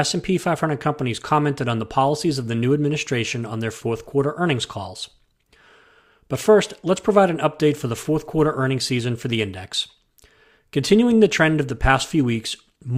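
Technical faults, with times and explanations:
No technical faults can be heard in this speech recording. There is nothing here to time or explain.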